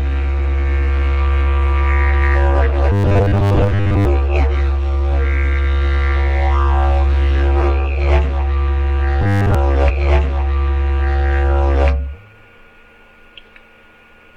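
From 2.92 to 4.05 s, and again from 9.22 to 9.55 s, there is robotic sound from repeated short buffers. New audio was likely reaching the player too slowly, so it covered each gap by replaying the last 10 ms chunk over and over while the real material was skipped. Because that chunk recurs 100 times a second, the sound takes on a fixed, metallic 100 Hz buzz. Roughly 70% of each stretch is repeated, and only a rough outline of the underlying sound comes through.

From 9.85 to 11.85 s, a stream segment is repeated. The player fetched or queued the same stretch of the stream twice, adding about 2 s of time. The audio jumps back with a small blip at the join and then replays that part of the programme before carrying on.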